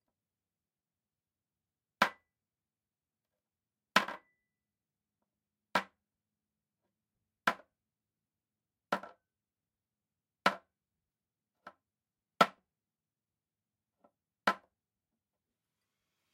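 No technical faults can be heard anywhere in the recording.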